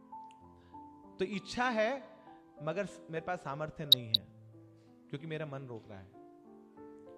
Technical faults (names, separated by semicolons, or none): DAB burbling